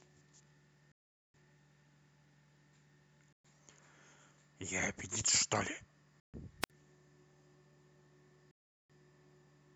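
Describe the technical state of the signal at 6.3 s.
At 6.3 s the speech drops out in a Bluetooth stall from 6.20 to 6.34 s. It goes silent for about 140 ms, likely because delayed packets starved the headphone buffer.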